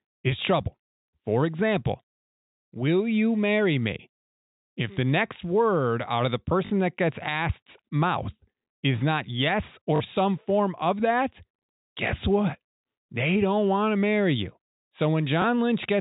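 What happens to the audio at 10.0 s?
Packet loss with last packet repeated, 9.96 to 10.0 s: 40 ms went missing and was filled by replaying the previous packet, causing a brief robotic stutter.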